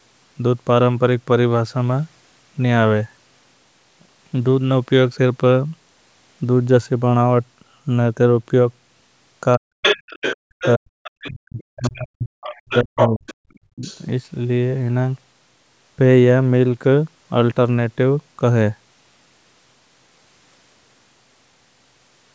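Speech suppressed in double talk at 9.56 to 9.86 s: the speech sinks steeply, by around 40 dB. The likely cause is an echo canceller unable to tell the talker from loudspeaker echo, so it turned both down. The other side's voice leaking through follows at 9.82 to 10.7 s, a second voice roughly as loud as the speech, which fits far-end playback the canceller failed to remove from the microphone. Background gated by the echo canceller at 10.37 to 10.48 s: the room sound drops about 34 dB for around a tenth of a second while the loudspeaker plays, then returns. The suppression comes back briefly at 10.76 to 10.88 s. Leakage follows at 11.03 to 11.9 s, faint at around 20 dB below the speech. From 11.27 to 13.26 s the speech is held down for about a second and a half in total, overlapping more leakage from 12.44 to 14.04 s at nearly speech level. A last, shallower dip of around 20 dB comes at 13.8 s.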